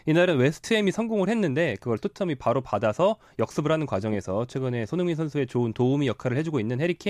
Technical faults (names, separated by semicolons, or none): Wi-Fi interference